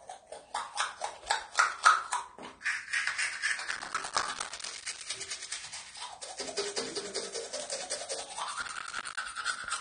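Everyday sound throughout, dull and smeared with a warbling, fizzy texture and nothing above 9.7 kHz: likely AAC compression at a low bitrate around 32 kbps, distinguishable from a simple low-pass filter by the smearing and warble. Processor overload crackle appears from 3.68 to 5.06 s and again from 8.63 to 9.17 s as gritty tearing made of many tiny silent gaps, which fits buffers of a few milliseconds missing their deadlines. Unlike clipping distortion, it punches holes rather than flattening peaks, and it stops abruptly once the load passes.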